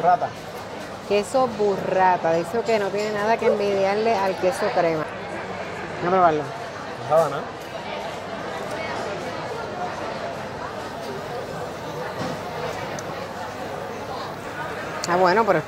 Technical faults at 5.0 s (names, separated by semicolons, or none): CD skip